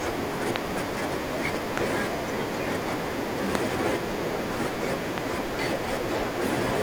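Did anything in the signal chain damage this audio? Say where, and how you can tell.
Yes. Sharp pops sit on top of the speech at 0.56 to 0.58 s, 3.55 to 3.57 s and 5.18 to 5.20 s, with a double pop between 1.78 and 2.00 s. Each peaks roughly 20 dB above the speech, which carries on underneath. This is a loud pop at the analogue wiring stage, likely from a voltage step or pulse off a connector, switch or static discharge. The circuitry after it shapes that pulse into a brief thump.

At 3.14 s and again at 5.55 s the speech jumps ahead slightly, with no gap of silence. This is a dropped buffer (overrun) in the driver or buffer stage, likely because the software did not collect its samples before the hardware overwrote them. Roughly 5 ms goes missing each time, and the two sides are spliced directly together.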